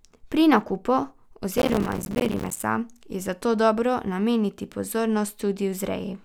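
A speech clip with processor overload crackle from 1.58 to 2.63 s: dense gritty tearing where the machine repeatedly misses its buffer deadlines, leaving short silent gaps of around 5 ms. The waveform shows many flat dropouts with abrupt edges, and the spectrogram shows a thicket of thin vertical broadband stripes.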